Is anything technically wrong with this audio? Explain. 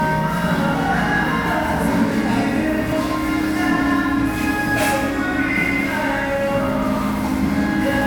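Yes. At 2.92 s and 6.97 s the audio jumps abruptly, skipping roughly 20 ms each time. This is likely a dropped buffer (overrun): the capture software fell behind and the hardware overwrote unread samples, so the surrounding audio is spliced straight together.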